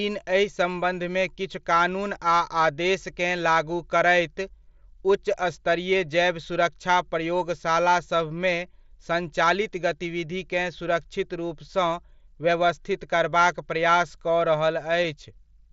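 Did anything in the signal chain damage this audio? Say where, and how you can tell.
Yes, concealed Bluetooth headset packet loss on the wireless link between headset and phone, at 8.29 s, just after "स्तरीय जैव सुरक्षा प्रयोगशाला", and again at 15.04 s. Each gap lasts about 7.5 ms, which fits a single lost mSBC frame. The receiver patched each hole by repeating the best-matching stretch of the preceding waveform, so both events are nearly hidden against the mSBC codec's light graininess and 8 kHz bandwidth.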